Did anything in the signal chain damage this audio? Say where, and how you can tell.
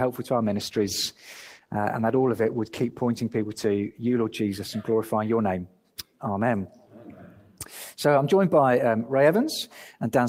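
Yes: a call bitrate drop in the codec stage, 0.42 to 4.41 s. The sound turns coarse and muffled, fitting a fall from 40 to 14 kbps, and the spectrogram's upper band vanishes until recovery.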